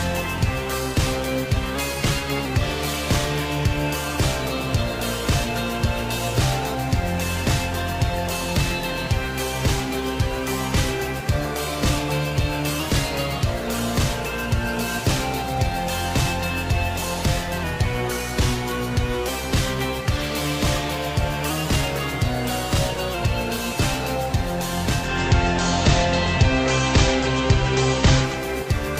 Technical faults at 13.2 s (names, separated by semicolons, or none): drift correction step